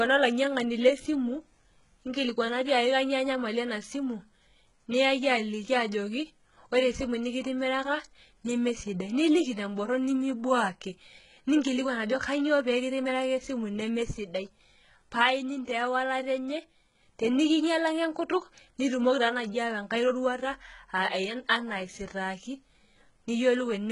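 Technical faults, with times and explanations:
Throughout: HE-AAC compression. The speech has likely been squeezed through HE-AAC at a very low rate, which fits about 12 kbps. The coder keeps only the lower spectrum and fabricates the treble by copying lower bands upward under a coarse envelope, so the highs stay bright but are not the original. Harmonics fail to line up across the crossover, making s sounds gritty and metallic. Nothing survives above 11.1 kHz, and the damage is heavy.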